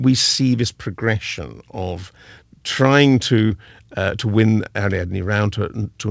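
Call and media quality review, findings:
Short concealed packet loss, 3.47–3.53 s, between "this progression of trying" and "uh to win": jitter-buffer concealment continues the prior sound over 30 ms, so you hear a smear rather than a silent dropout.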